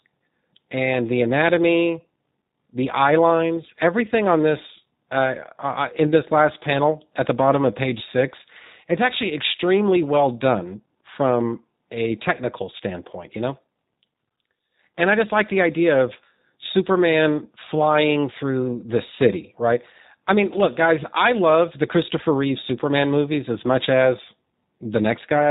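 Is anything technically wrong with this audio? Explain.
Yes. The whole clip carries G.729 codec damage, and it is plainly audible from start to finish. The speech has been rebuilt from a model rather than passed through. A vocal tract filter, a pitch predictor and a few pulses per short frame stand in for the real waveform. The rough, synthetic edge fits an 8 kbit/s G.729A encode. Nothing above 4 kHz survives, so the sound is dull and boxy. Consonants lose their crispness.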